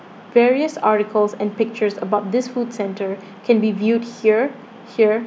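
Nothing to flag: no audible technical faults at any point in the recording.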